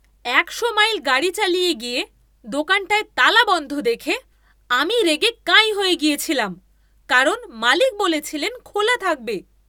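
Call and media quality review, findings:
No technical faults were detected in the signal path of this speech recording, with level, timing and continuity holding steady throughout.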